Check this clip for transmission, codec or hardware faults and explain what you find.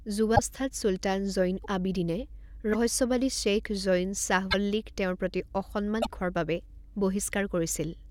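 Five short dropouts interrupt the speech, at 0.35, 1.62, 2.73, 4.50 and 6.01 s, each lasting about 30 to 50 ms. At each one the audio skips forward with a brief garbled burst or gap before clean playback resumes. The likely cause is a broken MP3 bit reservoir. Frames that borrowed space from earlier ones lost their data when stream frames went missing. The decoder then reads the wrong bytes for roughly one or two 24 ms frames.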